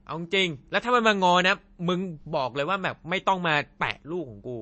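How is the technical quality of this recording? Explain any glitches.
The recording has clearly audible lossy-coding damage across its whole length. The speech has nothing above about 8.3 kHz, and the codec artefacts are plainly audible, likely from MP3 compression at a low bitrate, which fits roughly 32 kbps. Starved of bits, the encoder cuts the treble at a fixed point and discards weaker frequency detail.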